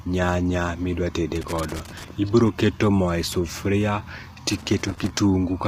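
From start to finish the speech has a heavy rough, grainy texture, and its top band sounds thinned and artificial rather than natural. The likely cause is low-delay AAC compression (AAC-ELD), with the damage pointing to a low bitrate in the region of 24 kbps. The coder has too few bits for its fine frequency grid, so it fills the gaps between harmonics with noise. On a spectrogram the harmonic stripes look blurred and grainy, with a hazy noise floor between them and a patchy, synthetic-looking upper band.

From 1.36 to 2.08 s, and again from 4.49 to 5.10 s, an irregular burst of loose connector crackle scratches through the sound. A worn or dirty contact is rapidly making and breaking as it moves, chopping the signal in and out. On the waveform the envelope looks ragged and broken up across each of these stretches. On a spectrogram the crackle appears as scattered broadband vertical streaks that run through the speech harmonics.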